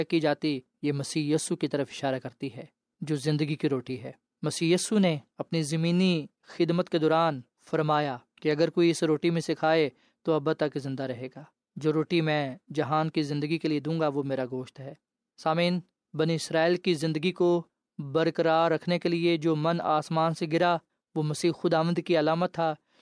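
Nothing technically wrong can be heard anywhere in this speech recording.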